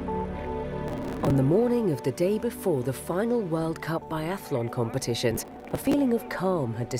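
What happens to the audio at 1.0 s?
At 1.0 s you're in the middle of a burst of processor overload crackle, running from about 0.88 to 1.31 s. The processor keeps missing its deadlines for short buffers of around 5 ms, and dozens get skipped outright, so the sound tears into gritty crackle until the load eases.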